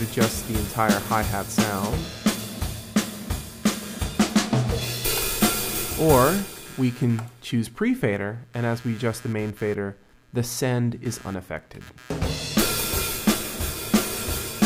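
Computer activity noise runs through the whole clip. It is a buzzing, chirping layer pulsing at around 150 Hz, about 25 dB below the sound. Processor or mouse load is disturbing the audio's shared ground. It follows computer activity, not the sound.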